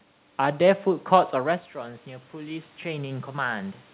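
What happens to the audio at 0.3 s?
At 0.3 s the audio is intact, with no dropout, glitch or other fault at that point.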